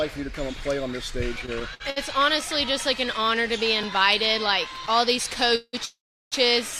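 The audio stutters and drags between 1.39 and 1.98 s: it catches five times, repeating the last sound for a moment before moving on, with the longest hitch about 62 ms and roughly 150 ms of filler in total, a quarter of that stretch. These are repeated stalls (stutter). Packets arrived late or slower than playback, so the jitter buffer kept running dry and the receiver padded each wait with continued sound. Nothing is lost, but the timing is stretched. At 3.83 s there is a sharp tick, and at 4.87 s another tick. Each is a block of digital silence, where the sound cut out and then snapped back with no fade. The first lasts about 1.45 ms, which fits a 64-sample block. The second runs about 5.2 ms, still short enough to come across as a tick or dip rather than a hole. From 5.56 to 5.75 s, and again from 5.85 to 6.34 s, the sound hangs as a fading smear and then goes quiet, for about 50 ms in the first hold and about 370 ms in the second, before resuming where it stopped. 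These holds last about 176 ms and 465 ms and point to a call audio freeze. The likely cause is packets held up in transit, so the jitter buffer emptied and the receiver filled the waits until delivery resumed, inserting gaps without losing anything.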